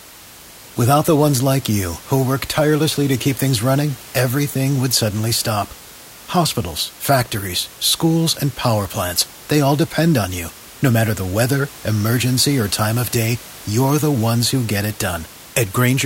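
No technical faults found in this speech recording; the only background is the room noise picked up at the microphone, sitting about 21 dB below the voice and belonging to the recording itself.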